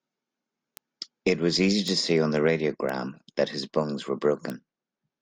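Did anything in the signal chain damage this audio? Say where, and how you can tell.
Yes. Four isolated ticks sit in this speech at 0.77, 1.88, 2.89 and 4.50 s. Each is a bit error spike confined to a single sample and peaking around -14 dBFS. The damage happened in the digital path, on a link or in storage. One flipped bit throws a sample off by a power of two, and the next sample is correct again. That makes a broadband click that has nothing to do with the speech around it.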